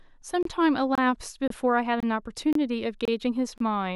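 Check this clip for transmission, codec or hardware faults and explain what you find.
The speech has a regular gap between chunks: 25 ms silent holes at 0.43, 0.95, 1.48, 2.00, 2.53, 3.05 and 3.58 s. They come from half-second blocks joined with padding or late starts. Unlike dropouts, nothing is lost, and the speech resumes exactly where it stopped.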